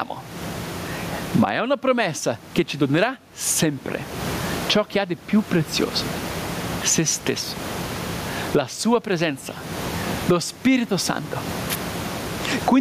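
A speech recording with gain pumping throughout, a gain swing of around 25 dB, with room noise about 33 dB below the speech. The likely cause is a fast limiter fighting excessive mic gain. The waveform looks flattened, with a rising noise floor between phrases, and the spectrogram's background band brightens and dims with the speech.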